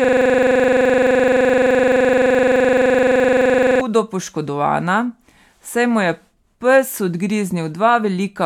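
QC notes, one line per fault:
0.0–3.81 s, system hang loop: it's already going when the clip starts. A single 42.67 ms slice of the speech repeats exactly, 88 times over, which fits a 2048-sample ring buffer the hardware kept replaying while the machine or driver was frozen. Because the slice is so short, you don't hear anything recognisable. It just becomes a steady, rough buzz at the 23.4 Hz loop rate until playback recovers.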